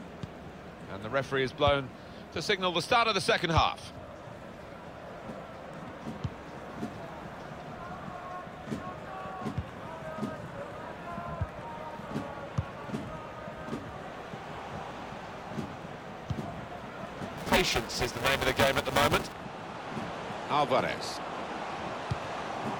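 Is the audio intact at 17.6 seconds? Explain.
No. At 17.6 seconds the audio is inside a stretch of buffer tearing that runs from 17.37 to 19.32 s. The software filling the ring buffer and the hardware draining it have drifted out of step, so most of each period is replaced by audio from about 5 ms earlier, with hard joins at both edges. The result is a robotic buzz at 345 Hz, a rate that fits a 128-sample buffer, audible wherever signal is present.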